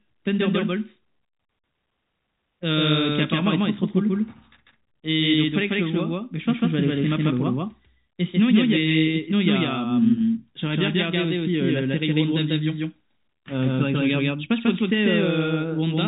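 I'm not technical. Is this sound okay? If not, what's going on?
No, not quite. All the way through, you hear a doubled audio track: the whole recording plays twice, with a second copy trailing the first by roughly 0.15 seconds and about as loud. That's why everything sounds smeared, like a stutter or a slapback echo, but with no roomy fade. It's likely that the sound got picked up a second time through a slower route. The narrow telephone-style sound is just the phone line doing its normal job.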